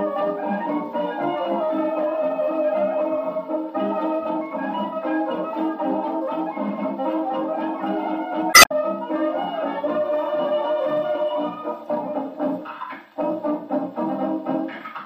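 At 8.50 s a stretch of damaged data in the compressed stream reaches the decoder. The bytes there no longer form valid frames, so the decoder misreads them, loses sync and hunts for the next good frame header, recovering by 8.72 s. For those roughly 0.2 s the sound turns into a brief glitch instead of the audio around it, and afterwards the timeline sits about 12 ms out of step with where it would have been.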